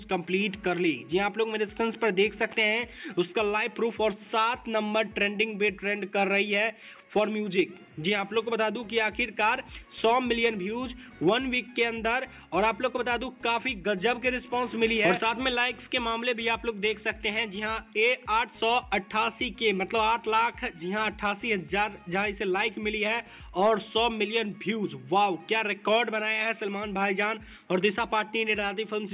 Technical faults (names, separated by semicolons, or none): none